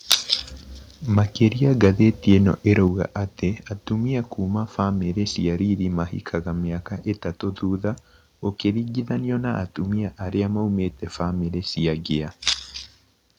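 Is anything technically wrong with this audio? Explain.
Yes. There are two problems, both in the first three seconds of the speech.

Microphone overload occurs at 0.11–0.14, 1.17–1.19, 1.83–1.89 and 2.30–2.34 s. The loudest peaks have flat, cut-off tops, with overshoots of about 16, 1, 4 and 2 dB. The likely cause is input gain set too high for the converter. This adds a harsh, crackly edge.

The microphone volume is stepped down at 2.88 s, just before "atĩ atumia kuma bamĩri". The voice and background drop suddenly by about 5 dB and stay lower. This is likely the call software reacting to the earlier clipping by cutting the input gain in one step.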